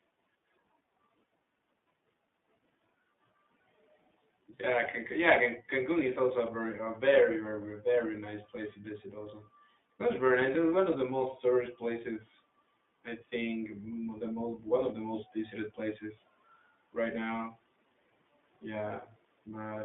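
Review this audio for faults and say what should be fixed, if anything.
iLBC codec artefacts run through the whole speech clip. The band is confined to 200 Hz to 3.6 kHz, and each 20 ms frame is coded independently, leaving a plainly audible rough, synthetic edge consistent with the 15.2 kbps mode. To prevent it, capture or route the call through a wideband codec instead of iLBC.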